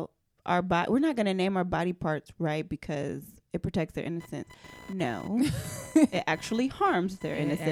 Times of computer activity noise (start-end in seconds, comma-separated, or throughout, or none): 4.20-7.71